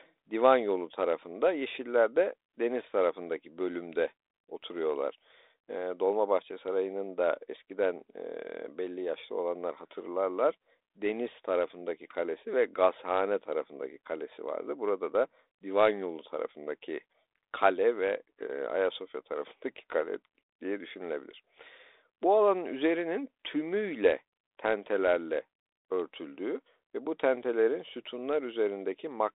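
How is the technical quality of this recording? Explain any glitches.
No glitches are audible: the speech sits on a 32 kbit/s G.726 ADPCM telephone path, band-limited to roughly 300 Hz to 3.7 kHz with nothing above 3.9 kHz and only light coding damage.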